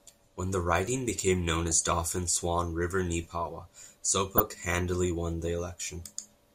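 DAB burbling at 1.70–1.92 s, after "the riding became known", and 4.34–4.65 s, before "won the". Uncorrected bit errors jump single MP2 sub-bands, giving squelchy bubbling, seen as blocky frame-length patches in narrow spectrogram bands.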